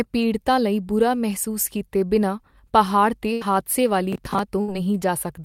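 A speech clip with two kinds of fault. Burst of packet loss occurs twice. After "ਬਿਨਾਂ ਪਹਾੜ 'ਤੇ", at 3.33 to 3.42 s, about 80 ms of audio goes missing and the receiver fills it with a fading held sound. A second burst at 4.61 to 4.69 s drops about 70 ms in the same way. Processor overload crackle runs from 4.13 to 4.39 s, after "ਬਿਨਾਂ ਪਹਾੜ 'ਤੇ ਹਾਦਸੇ". Around ten short buffers of roughly 10 ms each miss their deadlines and replay stale audio, producing gritty tearing.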